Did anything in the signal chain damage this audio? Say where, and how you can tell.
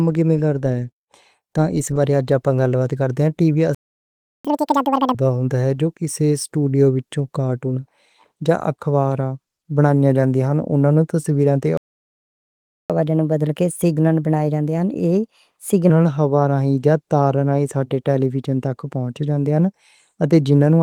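Yes. The damage is at the playback stage. The speech stops dead twice. After "ٹی وی" it goes silent from 3.75 to 4.45 s, a gap of 0.70 s. Again from 11.77 to 12.90 s, a gap of 1.12 s. The audio resumes where it left off, so nothing is skipped. That points to a playback stall, likely caused by the player's buffer running dry or its output thread being blocked.

Each stall is followed by catch-up at higher speed. From 4.45 to 5.15 s the speech plays at double speed. Pitch jumps by around 10 semitones, giving a chipmunk quality. After "تصویراں تے", from 12.90 to 15.90 s, it runs 1.15 times fast and sits about 2 semitones sharp. The player is resampling its backlog to recover the lost time. Speed and pitch both return to normal once the backlog clears.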